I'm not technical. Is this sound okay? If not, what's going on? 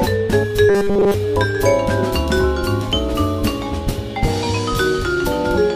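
No. From 0.69 to 1.14 s the sound turns into a stiff, metallic buzz. This is robotic sound from repeated short buffers. It's likely caused by audio arriving too slowly, so nearly every moment there replays a tiny snippet, making a 200 Hz drone.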